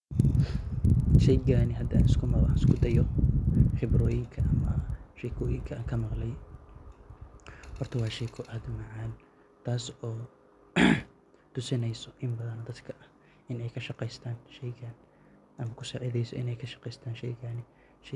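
A speech clip with a steady tick running through it from start to finish. The ticks repeat 20 times per second. They appear only while someone is talking and vanish in pauses. The fault is a resampler restarted on every block. Each chunk was converted alone, probably from 48 kHz down to 24 kHz, so every seam carries a small error. The 20 Hz rate fits 50 ms blocks.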